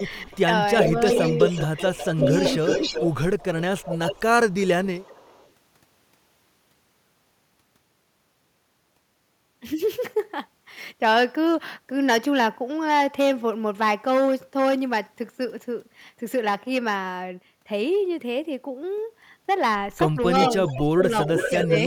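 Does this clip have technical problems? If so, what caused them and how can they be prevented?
Yes. There's an echo leak at 0.0–0.39 s, 0.75–5.51 s and 20.4–21.79 s: a copy of the speech trailing about 0.38 s behind, faint at first and later only about 5 dB down. It's likely a speakerphone whose echo canceller isn't removing what its mic picks up. Using a headset or tuning that canceller would prevent it.

There's also speech suppressed in double talk at 0.26–0.30 s, 0.81–1.16 s, 20.44–21.13 s and 21.49–21.85 s. The talker dips by roughly 10 dB, then by as much as 20 dB near the end. It's likely the canceller turning both voices down while both sides talk at once. A better double-talk detector, or a headset, would fix it.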